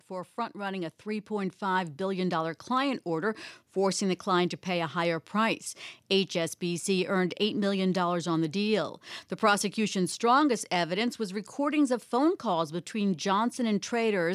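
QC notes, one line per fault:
0.07–3.44 s, automatic gain rising: the level climbs by about 8 dB over more than three seconds, leading into "forcing the client to", as the gain control lifts a quiet input. Background swells with the voice, unlike a talker simply moving closer.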